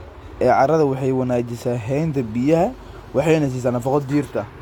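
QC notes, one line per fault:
Throughout: low-bitrate audio saved at a high bitrate. The speech was likely squeezed through a low-bitrate codec such as 40 kbit/s HE-AAC before being stored as high-rate MP3. The later encode cannot restore what was discarded, so the earlier coding artefacts remain, with nothing above 18.5 kHz.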